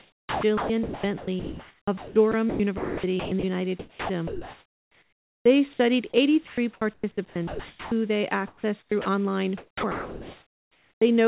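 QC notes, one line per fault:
0.00–3.44, 3.80–5.46, 6.48–7.92, 8.48–9.06, 9.58–11.02 s: sound chopped by the voice detector. Repeated on-off gating swaps about 0.3–2 s of each stretch for comfort noise, so the sound turns choppy, likely from sender VAD.
5.74–5.80 s and 6.10–6.14 s: sound dropped by the voice detector. A single brief cutout (60 ms, then 40 ms) becomes steady comfort noise before the sound resumes, likely from sender VAD missing quiet sound.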